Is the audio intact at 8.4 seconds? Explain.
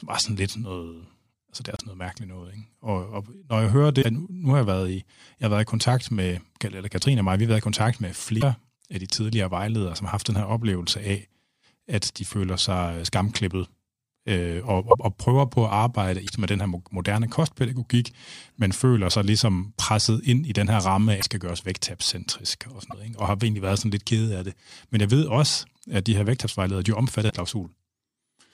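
No, a broken MP3 bit reservoir garbles 8.40 to 8.43 s: the sound jumps ahead as a likely cut frame's successor reads another frame's bytes, fitting one 26 ms frame.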